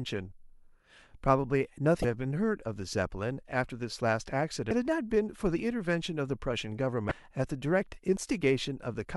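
At 2.01–2.05 s, 4.68–4.71 s and 7.08–7.12 s, the speech is cut by brief glitches of about 30 ms each. This is damaged data in a compressed stream: the decoder reaches corrupted frames, misreads them and loses sync until it finds the next valid frame header. On a spectrogram each appears as a narrow vertical disturbance that ignores the surrounding harmonics. The waveform shows an abrupt, hard-edged break at each point.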